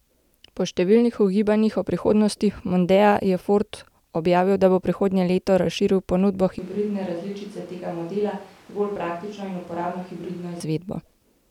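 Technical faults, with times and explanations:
6.59–10.60 s, switch to a distant microphone: the speech suddenly goes roomy and hollow, the low end thins out, the level drops by around 10 dB, and the background noise comes up to only about 25 dB under the speech. It snaps back just as abruptly at 10.60 s. That's likely the close mic dropping out and the recording falling back on one much further away, maybe a camera mic, which hears more of the room.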